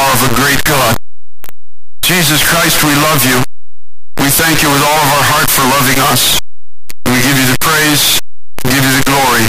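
Speech buried under loud, harsh distortion from start to finish, with soft sounds as loud as the strong ones. The likely cause is signed and unsigned mixed up in the 8-bit samples: the flipped top bit turns every zero crossing into a full-range jump.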